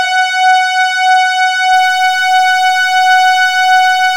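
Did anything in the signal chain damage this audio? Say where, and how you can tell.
Yes. From about 1.73 s to the end, the audio turns grainy, and the grit tracks the signal. Quiet passages get rough and the softest parts sputter or drop out. That's low bit depth without dither, most likely from a sample-format conversion step that truncated the samples. The error sits roughly 30 dB under the signal, which fits truncation to about 6 bits with no dither to decorrelate it.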